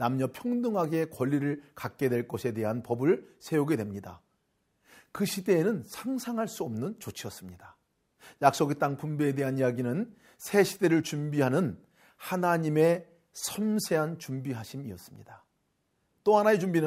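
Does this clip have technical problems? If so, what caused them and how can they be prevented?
No, nothing in this speech recording points to a technical fault, so there is no cause to trace and nothing to prevent.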